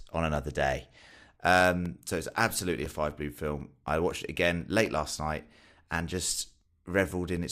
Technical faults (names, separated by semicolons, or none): periodic USB or driver dropouts